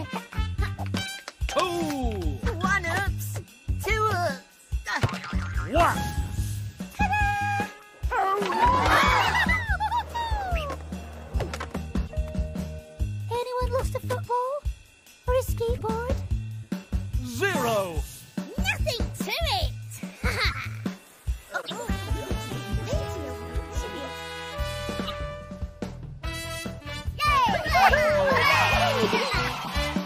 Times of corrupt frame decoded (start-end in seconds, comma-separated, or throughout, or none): 1.05-1.10, 7.75-7.82, 12.07-12.12, 15.74-15.81, 20.50-20.55, 21.61-21.72, 25.05-25.14, 29.51-29.69